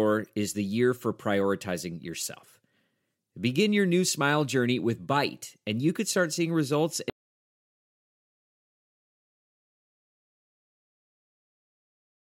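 At 7.10 s, just after "could start seeing results", the speech is cut off mid-flow by an audio dropout to silence that lasts the remaining 5.1 s. The input was likely lost, through a disconnected device, a failed link or a mute, while recording carried on writing silence. Unlike a pause, a noise gate or a fade, the cut is instant and the gap is silent with no room tone, and the speech never returns.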